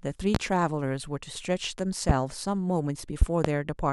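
At 0.35 s and again at 2.09 s, a single loud pop cuts through the speech, each lasting about 35 ms. From 3.22 s to 3.48 s comes a pair of pops. All three events peak roughly 20 dB above the speech. A voltage pulse is the likely cause, from a plug, switch or static discharge. The speech continues underneath each thump.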